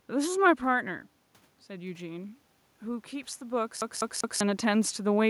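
A speech recording where, from 3.81 to 4.41 s, you get the classic CD stuck on one turn. The same slice of about 0.2 s plays three times over, with a tiny mute at each jump, giving that quick, perfectly even stutter. That's a scratch knocking the laser back one track at the same point on each rotation. The room noise underneath and the level shifts from the talker moving, around 0.5 s and again near 4 s, are part of the recording itself.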